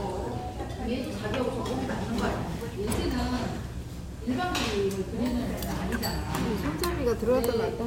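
No technical faults can be heard anywhere in the audio; the signal stays steady and intact throughout.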